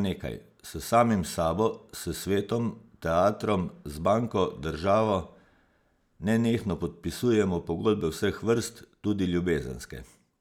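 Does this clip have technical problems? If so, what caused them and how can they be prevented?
No, there's nothing technically wrong to hear in this speech recording, so there's nothing here that needs preventing.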